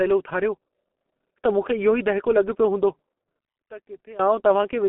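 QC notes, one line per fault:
Throughout: G.723.1 codec. The speech sounds muffled and hoarse, and consonants are smeared. At 6.3 kbit/s, with long coding frames, the voice model updates too slowly. The band is telephone-narrow, roughly 200 Hz to 3.4 kHz, with nothing above 3.8 kHz.
3.39 to 4.19 s: one channel inverted. For 0.8 s the speech drops by about 21 dB and turns faint. The likely cause is one stereo channel flipping polarity. The shared centre content cancels in the mono sum, leaving only the small difference between channels.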